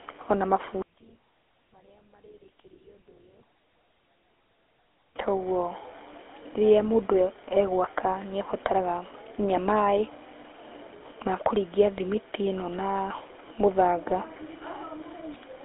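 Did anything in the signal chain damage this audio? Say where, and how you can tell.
Yes, at the codec stage the whole clip has been through what sounds like the GSM full-rate codec. The speech has that buzzy, gravelly grain throughout, and the codec damage is plainly audible. The band sits roughly 250 Hz to 3.5 kHz with nothing above 3.8 kHz, which fits a 13 kbps full-rate coder. It models the vocal tract and excites it with a sparse, regularly spaced pulse train, so the fine detail of the voice gets replaced by that rough texture.

From 0.82 to 5.16 s the level suddenly falls by about 32 dB and the speech almost disappears, then comes back. That's the signature of one channel inverted, most likely a polarity flip in the wiring or mixing stage ahead of a mono sum. With one side reversed, everything common to both channels cancels when they're added together. A centred voice is almost entirely common content, so only a faint residue from the small differences between channels survives.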